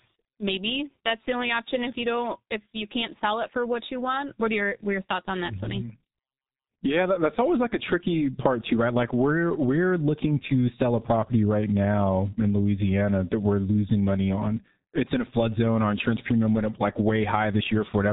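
A speech recording that sounds muffled and hoarse from start to finish, with consonants smeared together and a rough, hoarse texture over the voice. Nothing comes through above about 3.8 kHz, so the crispness of sibilants is gone. This is the sound of the G.723.1 codec under heavy strain: it models speech in coarse 30 ms frames at a rate near 6.3 kbit/s, and it cannot track fast changes between sounds.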